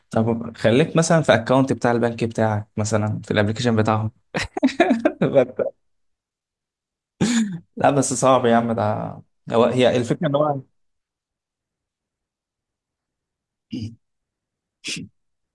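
A recording of speech with nothing technically wrong with it.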